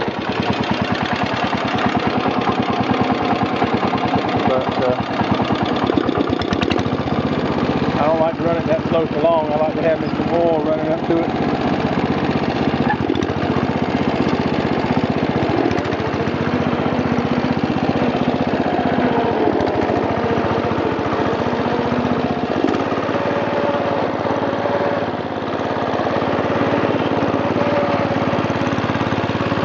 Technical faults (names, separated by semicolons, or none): none